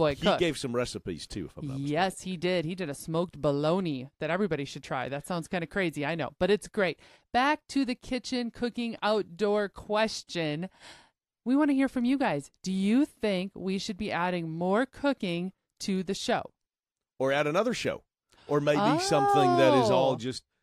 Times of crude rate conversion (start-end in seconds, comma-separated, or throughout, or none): 16.45-19.71